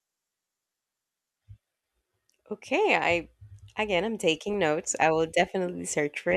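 Speech, with no technical fault to be heard anywhere in it. Nothing in the recording calls for a time, a value or a cause.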